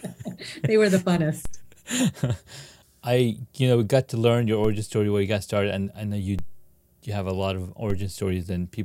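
Low thumps punctuate the speech at 1.45, 4.65, 6.39 and 7.90 s. Each is a DC step: the waveform's zero line jumps by about −21 dBFS, then decays back over a fraction of a second.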